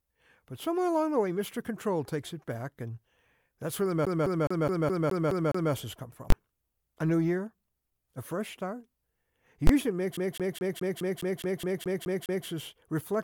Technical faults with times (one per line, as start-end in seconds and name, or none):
4.05-5.73 CD stuck on one turn
6.30 invalid numbers at full scale
9.67 invalid numbers at full scale
10.17-12.47 CD stuck on one turn